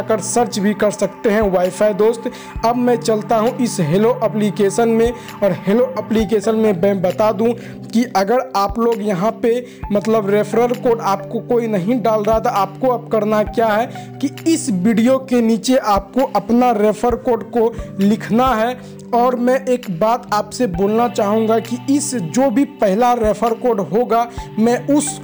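Crude rate conversion runs through the whole clip: samples were repeated rather than filtered, in a pattern that fits a step from 32 kHz to 48 kHz. The resulting error sits roughly 25 dB below the signal, a gritty, inharmonic fizz riding on loud and bright sounds.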